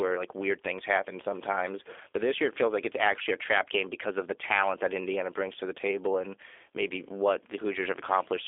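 From start to finish, the speech carries G.729 codec damage, and it is plainly audible. Nothing above 3.6 kHz survives, and the band sits between 300 Hz and 3.5 kHz. The codec rebuilds each short frame from a vocal tract filter, a pitch predictor and a few pulses. That coarse model makes the voice rough and slightly synthetic. The narrow band and texture point to an 8 kbit/s G.729A link.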